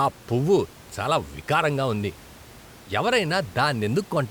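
Nothing stood out on listening to this speech; the only thing in the background is the room's own noise, sitting about 23 dB below the talking.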